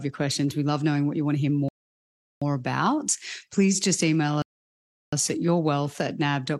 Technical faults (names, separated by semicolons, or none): rebuffering stall